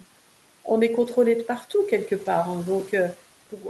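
Around 1.01 to 1.15 s you get a lost packet rebuilt from error correction: a short run of audio went missing, and the decoder filled it with the low-bitrate backup copy each following packet carried, so there's no dropout, just a grainier, noisier patch. That 80 ms stretch fits about four lost 20 ms packets. A second, single-packet rebuild shows up at 2.25 to 2.27 s, a brief rough blip, with the room noise sitting about 22 dB below the speech.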